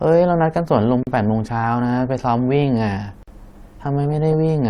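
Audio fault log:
1.03–1.07 s and 3.23–3.28 s, gap at a join of encoded pieces: the speech was encoded in separate pieces and joined without trimming. The start-up delay of silence from each encoder run and the padding on each piece's last frame were left in. A silence of 39 ms, then one of 47 ms, opens in the continuous speech. Each gap's edges are smeared by the codec, and the speech resumes exactly where it stopped.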